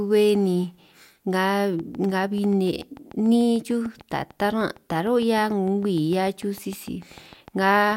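Speech, with a train of clicks running from 1.79 s to 7.93 s. About forty near-identical clicks arrive at a steady 6.7 per second. They peak roughly as loud as the speech and tick through the pauses too. Likely cause is interference from nearby equipment or a faulty connection or power supply.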